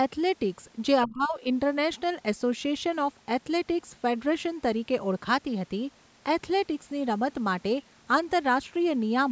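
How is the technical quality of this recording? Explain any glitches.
The recording has one clear glitch, early on. Speech suppressed in double talk occurs from 1.05 to 1.41 s: the voice suddenly sinks by roughly 20 dB for a little under half a second before recovering. This is likely the echo canceller in the call chain. When both ends talk at once, it can't tell the near talker from the loudspeaker echo, so it attenuates everything on the microphone side, taking the wanted speech down with the echo. The audio also stops at 8 kHz, consistent with normal call microphone processing.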